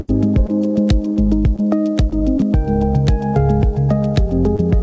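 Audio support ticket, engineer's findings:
Short concealed packet loss, five hits: 0.46–0.50, 1.56–1.60, 2.10–2.20, 2.38–2.41, 4.56–4.60 s. Brief smears or wobbles where about 20 ms went missing and the jitter buffer's concealment extended the last sound, then crossfaded back. Third one runs slightly stretched. Content tops out at 8 kHz, which fits G.722.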